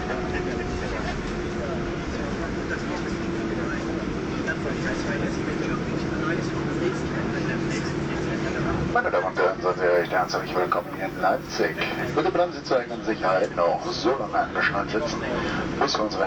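From 9.94 to 12.10 s, low bit depth with noise shaping: 9-bit rounding error pushed upward gives a thin hiss around 30 dB down, a bright band thickening toward the spectrogram's top.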